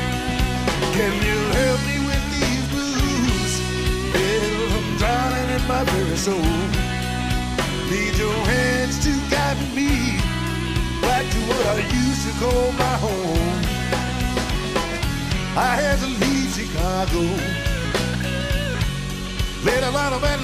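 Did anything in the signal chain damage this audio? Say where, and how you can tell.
No, no signal-chain damage heard.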